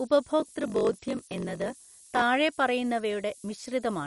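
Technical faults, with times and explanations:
throughout: low bit depth with noise shaping. The signal is held to about 7 bits, and the rounding error is pushed upward in frequency, so a steady, thin hiss sits only about 15 dB below the speech and grows much brighter toward the top of the band.
throughout: MP2 compression, likely the cause of the dull, gurgling, granular sound. Nothing is left above 11.3 kHz as upper sub-bands drop out, and the remaining bands are coarsely quantised, which fits a low rate around 48 kbps.
0.38 to 2.23 s: block size mismatch (padded). One stage writes blocks shorter than the next reads, which fits 1024-sample reads, and zeros fill each remainder. The inserted gaps buzz at 46.9 Hz, and the speech runs at 0.938 speed with its timbre kept.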